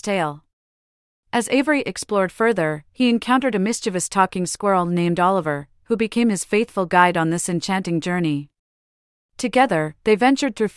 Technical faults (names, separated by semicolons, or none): none